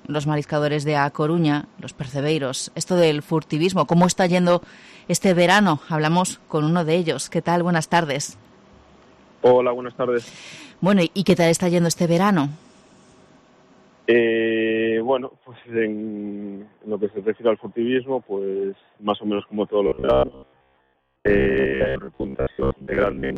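From 19.87 s to 23.37 s the audio takes on robotic sound from repeated short buffers: a rigid, metallic buzz near 66.7 Hz, likely from about 15 ms snippets being looped while most new audio is skipped. Unlike dropouts, nothing goes silent; the steady fixed pitch gives it away.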